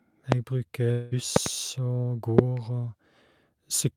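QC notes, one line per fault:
0.32–0.35 s, loud pop: a single sharp click roughly 25 dB above the speech, which continues underneath. It is likely a voltage spike, not a gap in the audio.
0.91–1.13 s, long network dropout: about 200 ms of speech is missing, covered by a fading buzzy continuation of the last sound with no silence. It is likely lost packets, and unlike a pop, audio is removed rather than added.
1.36–1.49 s, loud pop: two sharp clicks in quick succession, each roughly 25 dB above the speech, with the speech intact beneath. The likely cause is a plug or switch transient.
2.39–2.41 s, loud pop: one brief click roughly 25 dB above the speech, with nothing lost underneath. It is likely an electrical spike rather than a dropout.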